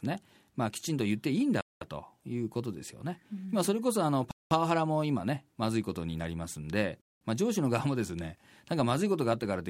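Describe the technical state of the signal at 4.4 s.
At 4.4 s the speech is interrupted by a gap between chunks, running from 4.31 to 4.51 s. The audio arrives in 2.5-second chunks. Here a 200 ms silence sits at a join. No sound is lost, but a short hole breaks the flow.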